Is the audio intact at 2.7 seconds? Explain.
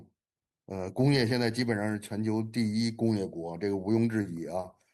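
Yes, at 2.7 seconds the speech is intact, with no dropout, click, distortion or other technical fault to be heard at that moment.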